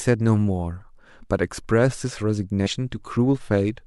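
At 2.65 s the speech jumps forward with a short smeared blip rather than a hard click. This is compressed frames skipped: roughly 150 ms of audio never plays, which points to about five missing or rejected frames of around 26 ms each.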